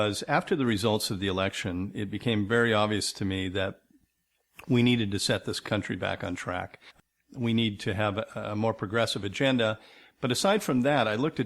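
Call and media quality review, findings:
No audible faults found in this recording.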